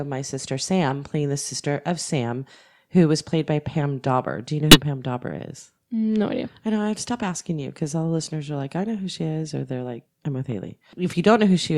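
At 0.89–0.92 s, before "playing the sister of", a corrupt frame decoded produces a short blip: flipped bits in a couple of frames misplaced energy in frequency. After "you know", 4.71–4.80 s brings a louder burst, and after "they're like I'm with", 10.68 s a faint chirp.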